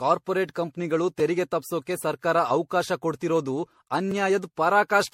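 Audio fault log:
throughout: generation loss, swirly, hollow, smeared sound with blurred attacks and nothing above 16.5 kHz, likely from around seven MP3 re-encodes near 64 kbit/s, quantisation noise accumulating each pass.
1.20 s and 4.11 s: block of digital silence, abrupt drops to zero lasting 2.67 ms and 1.23 ms, unfaded edges ticking; the first matches a 128-sample block.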